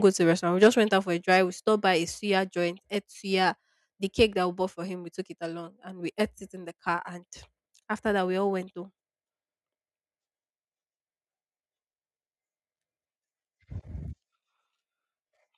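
Input gain set too high in this speech recording likely causes microphone overload at 0.62 to 0.68 s (about 5 dB over) and 1.32 to 1.37 s (about 2 dB over), flattening the peaks into harsh crackle. Automatic gain control then likely steps the microphone volume down, by about 3 dB at 0.67 s and about 2 dB at 1.68 s and 2.7 s, so the level drops abruptly each time.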